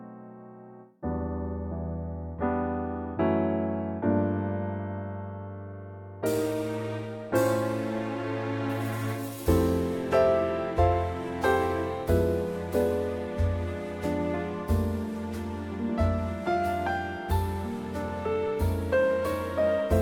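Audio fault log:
No faults detected; nothing to log for this audio.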